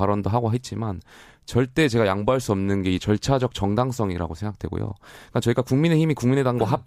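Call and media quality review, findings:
Clock slip clicks, 0.11 to 6.84 s: tick about every 30 ms. Likely free-running clocks about 700 ppm apart, single-sample slips; regular thin vertical spectrogram lines.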